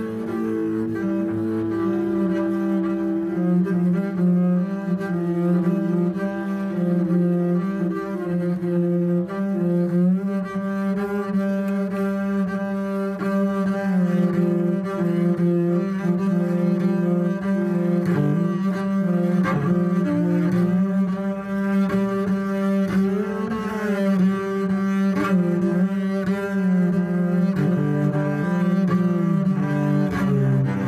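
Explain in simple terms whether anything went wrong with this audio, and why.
Nothing went wrong here; no faults can be heard.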